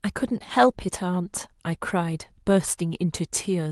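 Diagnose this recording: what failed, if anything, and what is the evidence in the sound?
Nothing failed: the speech comes through an ordinary WebRTC call path with Opus coding, its bandwidth topping out near 12 kHz, and there is no fault at any stage in the chain.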